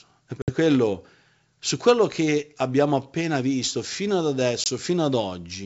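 Packet loss on an ADPCM call hits at 0.42 to 0.53 s, where about 60 ms of a few packets goes missing, and again at 4.64 to 4.67 s, where about a single 20 ms packet drops. Each gap is filled with hard-edged silence, then the decoder's predictor and step size resume out of step with the sender, so the speech returns slightly distorted before settling.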